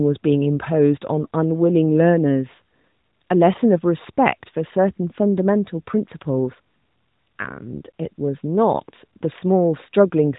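Nothing stood out on listening to this speech, which comes through the narrowband mobile codec with the expected band limit near 3.8 kHz and only light coding coloration.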